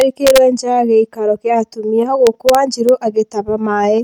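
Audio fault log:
0.01–0.38 s and 2.27–2.89 s, integer overflow: speech peaks reaching full scale, with no added gain, wrap to the opposite extreme instead of limiting, giving sharp cracks. The waveform shows peaks jumping rail to rail, and the spectrogram shows bright vertical broadband streaks.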